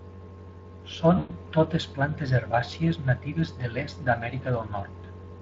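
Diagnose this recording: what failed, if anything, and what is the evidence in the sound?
Speex codec damage is plainly audible throughout, at the codec stage. The speech has a coarse, noisy texture from sparse excitation coding, consistent with roughly 20 kbps.

VoIP packet loss concealed by the speech codec occurs from 1.17 to 1.31 s at the network stage. The decoder stretches the last pitch and filter into a fading buzzy tone or coloured noise for 120 ms, which fits six lost 20 ms frames.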